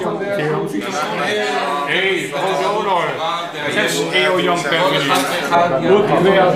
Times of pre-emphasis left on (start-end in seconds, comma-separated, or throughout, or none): 0.81-5.55